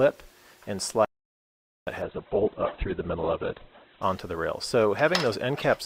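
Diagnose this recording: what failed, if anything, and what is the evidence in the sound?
Two things went wrong here. First, an audio dropout to silence from 1.05 to 1.87 s: the sound cuts off abruptly and leaves about 820 ms of silence, with no room tone or noise floor at all, before it snaps back in. That points upstream of the encoder, most likely the input stage losing its source through a dropped connection or a mute, while the recorder kept writing empty samples. Whatever happened in that window is simply gone.

Second, from 2.02 to 4.02 s the stream fell back to a lower bitrate. The treble vanishes suddenly, with nothing above about 4.1 kHz, and the sound gets thin, with more obvious codec smearing. There's no gap at either edge, just an abrupt quality switch and then a recovery. That's the network side forcing the adaptive player onto a cheaper rendition, and the sound fits Opus dropping from around 64 kbit/s to 8 kbit/s for those two seconds.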